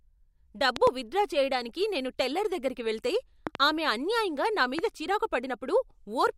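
A speech recording with loud pops: a double pop from 0.76 to 0.89 s, peaking about 20 dB above the speech; another pair from 3.47 to 3.57 s, about 15 dB up; and a single pop at 4.79 to 4.81 s, also about 15 dB up. The speech continues underneath each one. These sharp transients are likely voltage spikes from a connector, switch, static discharge or driver glitch, shaped by the downstream circuitry into brief thumps.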